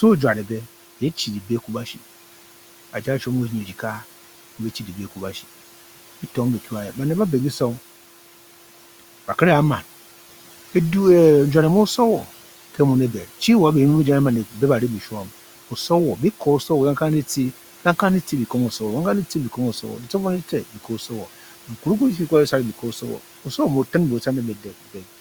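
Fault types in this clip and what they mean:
Noise suppressor artifacts: Throughout the speech, a suppressor is pulling down the bands it judges to be steady background, by about 12 dB, updating frame by frame. The room noise, which sits about 20 dB below the speech, sinks in the gaps and comes back up under each phrase. On a spectrogram the noise floor shows as a patchy, mottled haze that darkens between phrases and brightens beneath them, with scattered isolated specks rather than an even wash.
Speech cut by the noise suppressor: Between 20.74 and 21.11 s the suppressor mistakes part of the speech for background and turns it down along with the noise, by about 9 dB at its deepest. Only around a tenth of a second within that span is affected, so the loss falls on brief, low-level sounds that come out faint or swallowed. On the waveform those moments show as a sudden dip in the envelope, and on a spectrogram as missing or dimmed soft energy.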